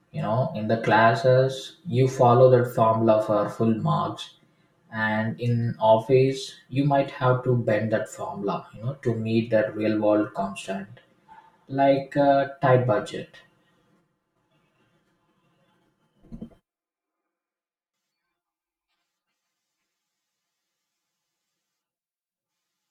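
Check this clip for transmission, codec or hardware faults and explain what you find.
One fault runs through the whole clip: channel delay (comb filtering). One channel lags the other by about 5 ms, and when the two are summed to mono the speech cancels against its delayed copy at evenly spaced frequencies, starting near 100 Hz and repeating roughly every 200 Hz. The result is a hollow, phasey tone. Unlike a flanger or phaser, the notches never sweep, and unlike plain low-pass dullness, the high end is thinned in regular gaps rather than simply cut.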